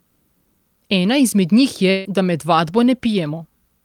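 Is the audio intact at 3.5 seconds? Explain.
Yes, at 3.5 seconds the speech runs intact, with no dropout, click, distortion or other fault at that point.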